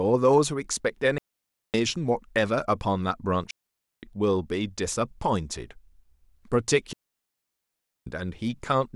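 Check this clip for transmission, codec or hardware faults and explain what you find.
Three digital wireless dropouts interrupt the speech, at 1.18–1.74 s (about 0.56 s), 3.51–4.03 s (about 0.52 s) and 6.93–8.07 s (about 1.14 s). Each time the receiver lost too much data and muted with a very fast fade. The result is a clean gap of near silence with no noise burst on either side.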